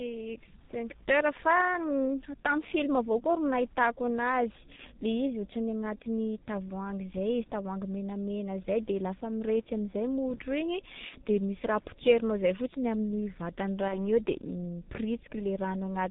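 G.723.1 codec coding runs through the whole speech clip. The narrow band, with nothing above 4 kHz, and the slow-moving voice model point to a rate near 6.3 kbit/s. The damage is heavy: muffled, hoarse tone with smeared consonants.

VoIP packet loss concealed by the speech codec appears at 4.76–4.81 s, 11.09–11.14 s and 13.88–14.07 s. Each gap fits one lost 30 ms frame. The decoder stretched its last pitch and filter into a fading buzzy tone or coloured noise, and the last event stays distorted longer while recovering.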